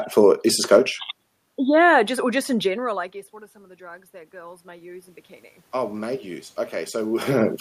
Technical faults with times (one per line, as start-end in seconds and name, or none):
3.78-7.33 automatic gain rising